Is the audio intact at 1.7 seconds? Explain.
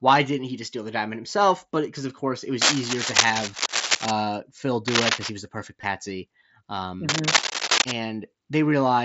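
Yes, the speech is intact at 1.7 s, with no fault at that moment.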